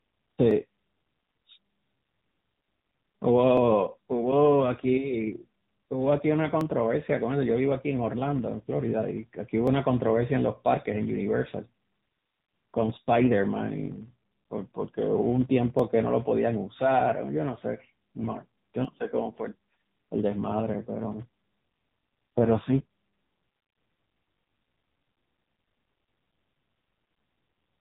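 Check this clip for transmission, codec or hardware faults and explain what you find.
Three faults are audible in this speech clip: a block-rate buzz, narrowband codec damage, and a recurring click.

Filter restarted on every block: throughout, a buzz at 200 Hz rides on the speech and rises and falls with its level. The filter resets its state at each block boundary, leaving a small transient each time. The 200 Hz rate fits a block of about 5 ms.

AMR narrowband mobile codec: throughout, nothing above 3.8 kHz survives, and the speech sounds plainly buzzy and synthetic. The coder rebuilds the voice from a vocal-tract model driven by sparse pulses. The degree of damage points to a low mode around 7.95 kbps.

Clock drift buffer slips: from 0.51 s to 24.97 s, a click recurs every 3.06 s, roughly ten in all. The likely cause is two devices on clocks a few hundred ppm apart, so the buffer between them periodically drops or repeats a few dozen samples.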